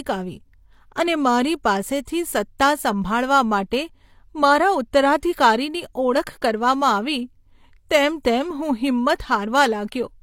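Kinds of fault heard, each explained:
Pre-echo: a brief 11 ms hiss smears the sharp onset at 2.59 s, because transform-codec quantisation noise spreads into the quiet before the attack.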